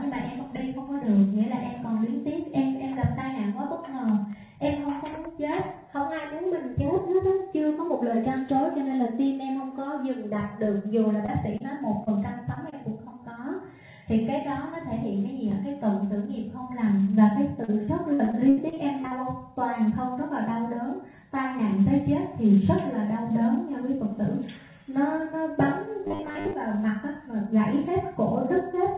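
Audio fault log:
11.26, 11.58, 12.04, 12.54 and 12.70 s, short concealed packet loss: about 20 ms of audio went missing each time, and the receiver patched each hole by extending the preceding sound before blending back. Each one is a brief smear or wobble in the 4 kHz-limited call audio.
17.64 to 19.13 s, repeated packet loss (robotic sound): ten gaps arrive in quick succession, the longest 78 ms, so about a fifth of this stretch is patched-in continuation. Holes follow each other before the sound recovers, giving choppy audio with pieces missing.
26.05 to 26.53 s, robotic sound from repeated short buffers: most of this half-second is a rigid metallic buzz at 100 Hz. The buzz is likely caused by the same 10 ms buffer being replayed while fresh audio was skipped, with the repetition imposing that fixed pitch.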